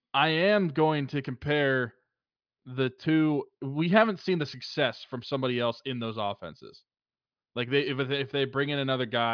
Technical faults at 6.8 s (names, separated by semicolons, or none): none